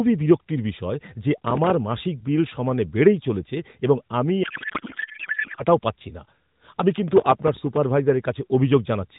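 From 1.38 to 1.70 s the processor falls behind and misses a run of very short audio deadlines, each gap filled with a scrap of old audio. That fits buffers of about a millisecond and a half, and the result is a gritty processor overload crackle riding on the speech. From 4.44 to 5.65 s a codec payload misread occurs. The receiver unpacks octet-aligned AMR frames as if they were bandwidth-efficient, so the bits land in the wrong fields. The narrowband AMR speech is replaced by garbled noise and warble that barely tracks it. From 7.08 to 7.83 s the same overload crackle returns, longer this time, with a longer burst of tearing before it stops.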